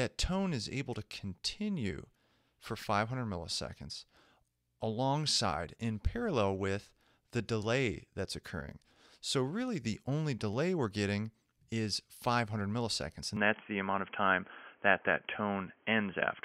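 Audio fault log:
13.37–16.45 s, input switched to a poorer device: at 13.37 s the sound abruptly narrows, with nothing above 3.3 kHz, and stays dull and boxy to the end of the clip. The change comes with no gap. The level shifts by about 5 dB, and a new noise floor appears about 35 dB below the signal. The likely cause is the system moving its input to a different microphone or a headset's call profile, whose narrower band, own level and own background noise replace the original device's sound.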